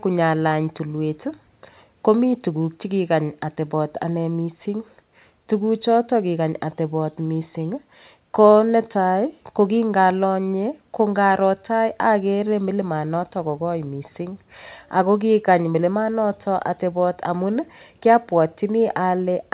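No technical faults are audible.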